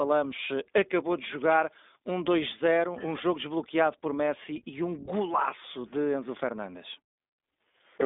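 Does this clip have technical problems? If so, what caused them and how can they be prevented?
Yes. Throughout the speech the sound is thin and boxed-in, with nothing above about 3.8 kHz and little below 250 Hz, and a slightly rough, synthetic grain that is plainly audible. This is the iLBC codec, a narrowband telephony coder that rebuilds each short frame's excitation independently, here in blocks that fit 20 ms frames and the 15.2 kbps mode. Prevent it by carrying the call over a wideband or fullband codec instead.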